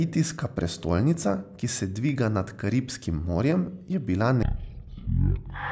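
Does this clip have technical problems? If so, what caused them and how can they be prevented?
Yes. From 4.43 s to the end, just after "je bila", a wrong sample rate slows the speech to one third speed and drops it 19 semitones, consistent with 48 kHz audio played at 16 kHz. Checking that the playback rate matches the recording rate, or resampling before output, prevents it.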